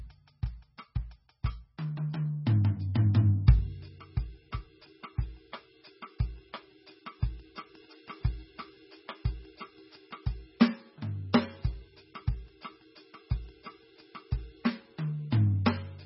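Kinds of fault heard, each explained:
MP3 compression: the music has no content above about 5.6 kHz and sounds watery and swirly throughout, with smeared attacks and weak detail flickering in and out. This is likely heavy MP3 encoding at a very low bitrate, around 16 kbps, which cuts the treble and drops quiet frequency lines from frame to frame.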